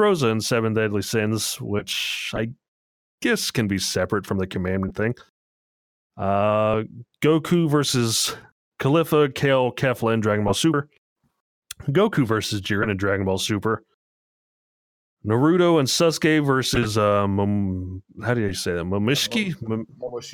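At about 10.74 s there's a case of compressed frames being skipped. A chunk of the coded speech just never gets decoded, so the audio leaps forward by something like 150 ms, which fits roughly four dropped frames of 32 ms each. The frames were either missing or rejected by the decoder as corrupt. The speech lurches ahead.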